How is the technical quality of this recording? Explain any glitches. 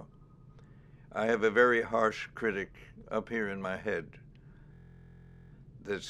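One glitch stands out: from 4.74 to 5.50 s a steady 43 Hz buzz takes over. This system hang loop replays one 23.2 ms slice, which fits a 1024-sample buffer, as the hardware kept cycling it while the system froze.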